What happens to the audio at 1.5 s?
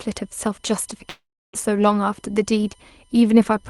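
At 1.5 s the sound is inside a long network dropout running from 1.09 to 1.55 s. Audio likely stopped arriving over the network. The receiver stretched the last sound into a fading buzz, then held near-silence for about 0.32 s. Sound resumes at 1.55 s, with about 0.44 s lost.

A USB whine also runs under this moment. It is a fixed tone on a 1 kHz base, strongest at 3 kHz. It sits roughly 40 dB below the signal. Current drawn in 1 ms bus frames leaks into the audio through power or ground.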